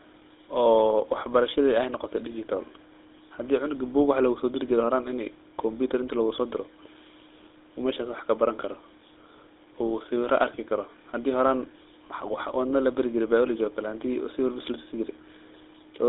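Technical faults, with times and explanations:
Throughout, GSM full-rate codec: band-limited to 150 Hz–3.6 kHz, nothing above 3.8 kHz, with a buzzy, gravelly roughness from pulse-driven excitation, not plain telephone dullness, fitting 13 kbps.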